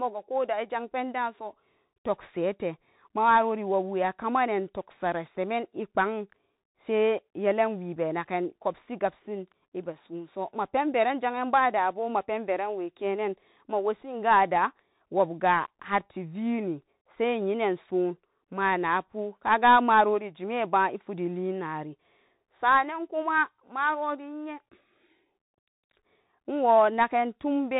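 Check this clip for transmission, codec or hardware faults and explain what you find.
The whole clip carries Bluetooth CVSD headset codec damage, plainly audible from start to end of the speech.

Throughout, a one-bit delta coder nudges the signal up or down with an adaptive step, which fits a 64 kbps headset link. Nothing passes above 4 kHz. Loud high sounds outrun the step and distort, s sounds turn scratchy, and granular hiss sits underneath. A spectrogram shows a hard ceiling at 4 kHz over a grainy noise floor, and the waveform shows slope-limited, staircase-like edges.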